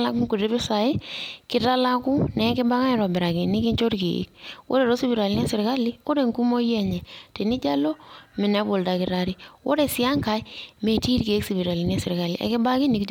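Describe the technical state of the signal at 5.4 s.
At 5.4 s the signal is intact, with no fault audible at that point.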